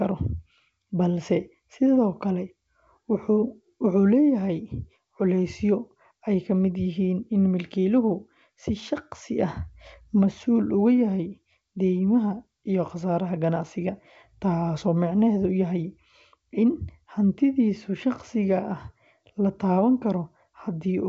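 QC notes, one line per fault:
Nothing to flag on this speech clip: the G.722 wideband telephone coding at 64 kbit/s is working as it should and leaves at most a faint trace on the sound.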